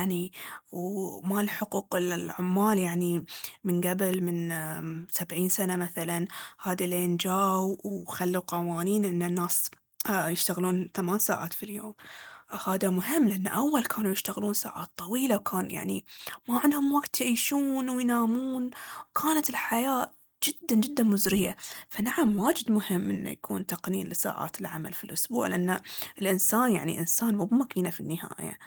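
At 4.14 to 4.16 s and again at 16.29 to 16.31 s, a single loud pop, likely from a voltage pulse such as a plug or switch transient, jumps about 10 dB above the speech. It shows as a sharp waveform spike and a full-height vertical stripe on the spectrogram.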